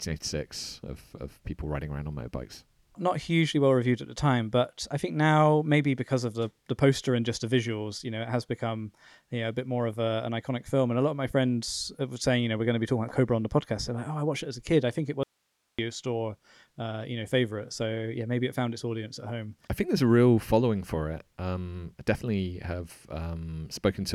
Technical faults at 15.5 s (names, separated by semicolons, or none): audio dropout to a faint residue